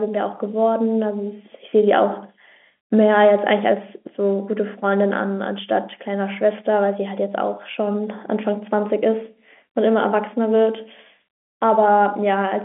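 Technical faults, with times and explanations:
No technical faults heard.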